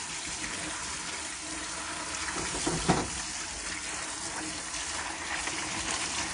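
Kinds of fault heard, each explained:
WMA compression: plainly audible washy ringing and signal-following hiss, likely from a low-bitrate transform codec fitting 32 kbps; the spectrogram shows nothing above 10.1 kHz.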